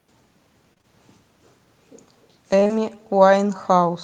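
Throughout the speech, every phrase is trailed by a faint, thin copy of itself arriving about a third of a second later, sitting about 28 dB below the direct sound. This is echo with no canceller: the far end plays the call through a loudspeaker, its microphone catches that playback, and nothing strips it out, so the talker's own voice returns after the network round trip.

From 0.73 to 0.85 s there is a short smeared, wobbling stretch where the sound seems to hang on itself, made of three back-to-back repairs at 0.73–0.78, 0.78–0.81 and 0.81–0.85 s. A second, similar smear runs from 2.59 to 2.71 s, covering 2.59–2.63, 2.63–2.67 and 2.67–2.71 s. These are short concealed packet loss. Each hole is 20 ms of missing audio, which fits 20 ms packets, and three were lost in a row each time. The receiver patched each hole by extending the preceding sound and then blending back into the real signal, which produces the brief smearing.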